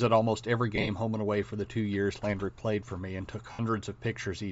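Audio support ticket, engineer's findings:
Speech, grainy, breathy top end throughout, highs replaced by noise-like fill. Likely Bluetooth LC3 compression at a low rate, fitting about 32 kbps with 10 ms frames. Texture is noisy, not warbly, unlike MP3-style artefacts.

Lost LE Audio frames at 0.76–0.89 s, after "at almost every", before "home and away for": about 70 ms lost in short bursts, the longest roughly 20 ms, spread over about 120 ms. Again at 3.52–3.60 s, after "for me and took", about 70 ms. Decoder concealment reuses the last spectrum with random signs, leaving a noisy fill, not a hard gap or click.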